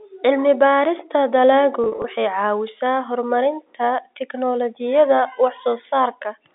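From 1.84 to 2.04 s the speech shows packet loss with pitch repetition. About 100 ms of audio is missing, scattered across that 200 ms in brief gaps, which points to several small packets going missing. The longest gap is only about 40 ms, so the receiver's repeated pitch period never fades fully to silence. Each gap sounds like a momentarily held, buzzy tone. Plain dropouts would leave hard silent holes or clicks instead. All of this sits within the narrow telephone band of G.711 coding.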